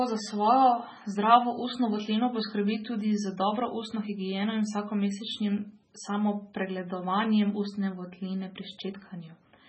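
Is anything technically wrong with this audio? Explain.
Yes. MP3 compression damage runs through the whole clip and is heavy. The sound has nothing above about 8.3 kHz, and its body has a watery, swirling texture. This points to a very low-bitrate MP3 encode, likely around 16 kbps. Starved of bits, the encoder cut the treble at a fixed point and dropped weaker frequency detail, which flickers in and out between frames. That leaves the speech dull, with sibilants and consonant onsets smeared and chirpy.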